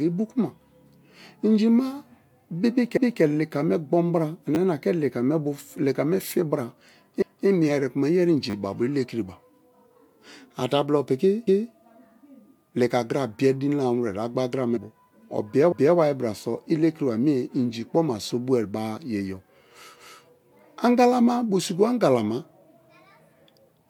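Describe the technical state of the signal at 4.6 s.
A repeated buffer occurs from 4.55 to 4.57 s: new audio arrived late, so a 10 ms buffer was played twice more, with essentially nothing lost. It sounds like a brief click-buzz. The waveform shows identical 10 ms blocks with hard joins, and the spectrogram shows thin vertical lines at each join.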